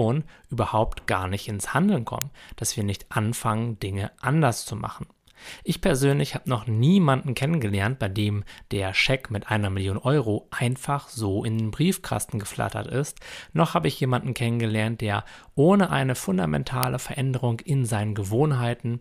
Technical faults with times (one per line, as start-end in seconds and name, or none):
2.22 uninitialised buffer
16.83 uninitialised buffer